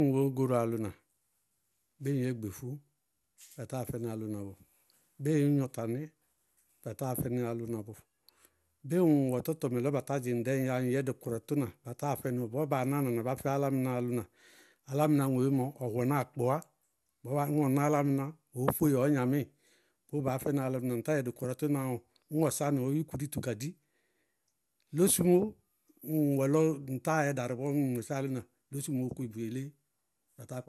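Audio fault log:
throughout generation loss: swirly, hollow speech with blurred attacks and nothing above 12.6 kHz, far more smeared than one encode explains, likely about seven MP2 passes, fitting roughly 128 kbit/s.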